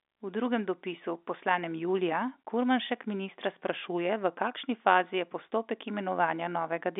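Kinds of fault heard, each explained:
No faults are heard in the speech, which sits in an ordinary telephone band of roughly 250 Hz to 3.6 kHz as carried by G.711 telephone coding.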